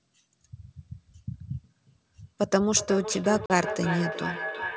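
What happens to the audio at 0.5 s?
At 0.5 s the speech carries no fault; it has simply passed through call microphone processing and G.722 wideband telephone coding, which cap it at 8 kHz.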